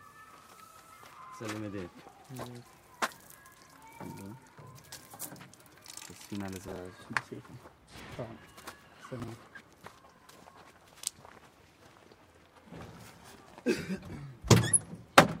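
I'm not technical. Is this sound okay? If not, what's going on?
No. At four moments the sound briefly jumbles: around 3.2 to 3.28 seconds, 6.68 to 6.76, 8.0 to 8.16, and 9.2 to 9.28. These are chunks out of order. The audio travels in small pieces of about 40 milliseconds, and one piece showed up late and played after the piece meant to follow it. At 8.0 seconds it was three pieces late, so that stumble lasts longer. Nothing is missing, but each swap leaves sudden joins.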